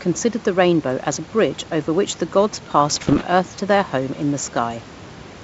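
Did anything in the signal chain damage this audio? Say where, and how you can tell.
Yes. The damage happened on the transmission link carrying the G.722 ADPCM stream, where bit errors corrupted the coded data between about 2.92 and 3.23 s. Each flipped bit throws off the decoder's step size and predictor, so the error doesn't stay a single click but rings on for several milliseconds. That is why this stretch of speech has pops, rough gritty bursts and brief jumps in level. The spread points to an error rate around one percent.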